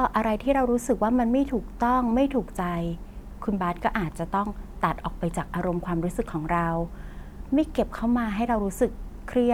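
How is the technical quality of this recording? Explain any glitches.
No glitches turn up anywhere in this recording, so there's nothing to explain.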